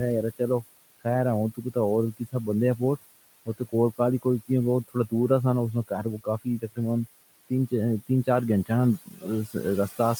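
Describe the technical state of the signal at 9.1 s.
At 9.1 s you're inside a stretch of speech cut by the noise suppressor, running from 9.06 to 9.24 s. The suppressor mistook part of the speech for background and pulled it down, by about 16 dB at its deepest, so roughly a tenth of a second of sound comes out swallowed and faint.

Under that, the noise suppressor artifacts running through the whole clip are still there. The gain is working band by band, knocking the room noise, which sits about 16 dB below the speech, down by about 18 dB. The noise sinks between the words and rises under them.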